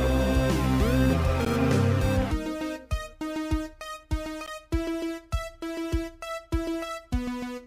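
A gap between chunks sits at 1.45 s and again at 4.46 s, each a hard-edged hole of about 13 ms in the audio. The 3-second spacing shows the stream arriving in 3 s chunks, with silence inserted at each join rather than any sound being lost.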